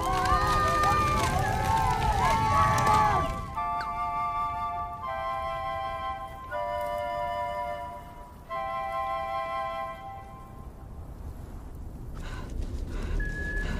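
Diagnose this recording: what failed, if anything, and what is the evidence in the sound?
Nothing failed: there is no fault in this recording, and the sound gives no evidence of one.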